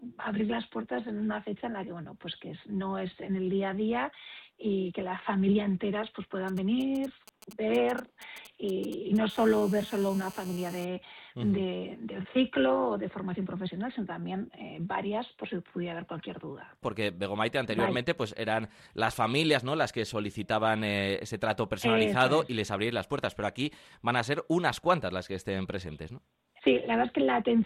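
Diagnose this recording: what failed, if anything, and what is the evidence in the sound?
The first fault sits in the analogue stage: GSM signalling bursts from 6.48 to 9.18 s. Irregular clusters of brief buzzes at a 217 Hz repetition rate form a galloping dit-dit-dit rhythm, sitting roughly 20 dB under the programme. A nearby 2G handset was exchanging short control transmissions, and the audio circuit rectified the RF pulses into audible energy.

The second fault is GSM phone buzz in the same analogue path, from 9.30 to 10.85 s. The pattern changes to a continuous, hard, raspy 217 Hz buzz rich in harmonics, about 20 dB below the wanted signal and unrelated to it. The handset has moved into a call and now transmits a burst every TDMA frame, 217 times a second. The same nonlinear junction demodulates that pulse train into a steady tone.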